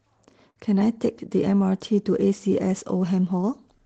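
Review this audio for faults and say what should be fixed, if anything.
From 0.50 to 0.57 s the sound smears into a brief fading hold. This is a burst of packet loss: about 50 ms never arrived and was concealed by stretching the preceding audio. Enabling forward error correction or adding jitter-buffer headroom on the call link would guard against this.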